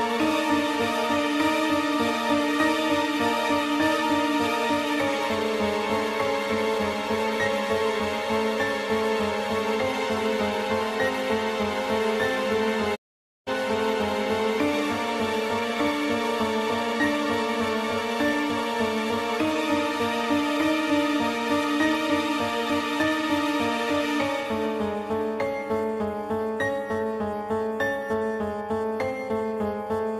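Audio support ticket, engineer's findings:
Sound quickly fades to silence at 12.94 s and returns at 13.49 s, about half a second missing. Digital broadcast dropout at the receiver: bad or missing frames, muted with a 20 ms fade until clean frames resumed. Gap fits roughly twenty lost frames.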